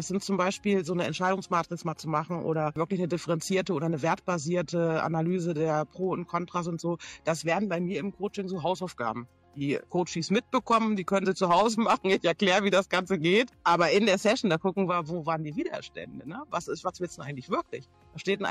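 No technical faults can be heard anywhere in this recording.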